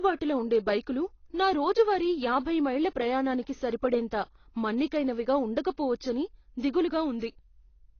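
From start to finish the speech sounds dull and smeared, with nothing above 6.6 kHz and a plainly audible warbly, fizzy texture on sibilants and held sounds. That's likely AAC compression, low-bitrate AAC-LC around 24 kbps, lowering its cut-off and starving bands.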